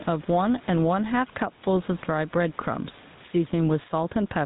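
Speech runs through the whole clip with two faults. The first is gain pumping, likely from gain set far too high and a fast limiter pulling it down on each loud syllable. The room background sits about 31 dB below the speech, and the gain swings by around 10 dB under loud sounds. Because the gain moves with the speech, it is not steady noise or a noise gate, which would cut the gaps to silence. The second fault is the GSM full-rate codec, heard as a buzzy, gravelly roughness on the voice with nothing above 3.8 kHz, which fits a 13 kbps GSM full-rate stream. That grainy pulse-driven texture is what separates it from a plain low-pass filter or narrowband telephone line, which would sound muffled but smooth.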